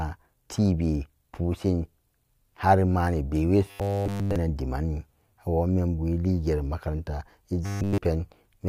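From 3.66 to 4.37 s, and 7.66 to 7.99 s after "eligeri makaranta", robotic sound from repeated short buffers gives a rigid 100 Hz buzz, likely a looping 10 ms segment, seen as evenly spaced harmonic lines and identical waveform cycles.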